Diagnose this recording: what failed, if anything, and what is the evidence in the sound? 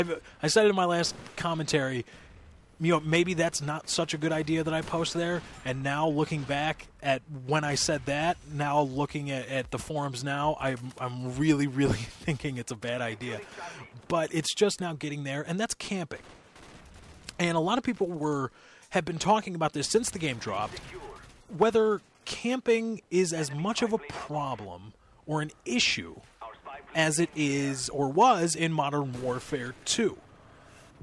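Nothing in the sound points to a failure at any stage of the chain. No event stands out that would mark a break between capture and playback.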